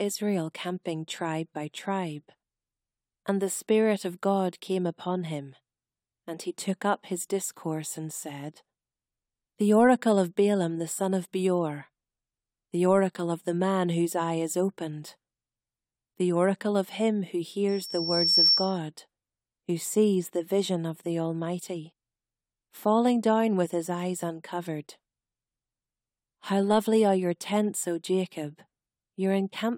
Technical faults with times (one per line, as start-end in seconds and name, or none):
17.68-18.78 loudspeaker feedback squeal